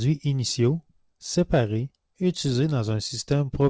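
Between 2.70 and 3.64 s, a handful of packets in the call stream arrived late or never arrived, producing scattered short gaps. The receiver covered each hole by extending the sound just before it, filling about seven tiny gaps, none longer than roughly 15 ms and together only around a twentieth of a second. The speech stays clear, with brief ticks and smeared hiccups dotted through that stretch, all within a band that stops at 8 kHz, which fits the G.722 call path.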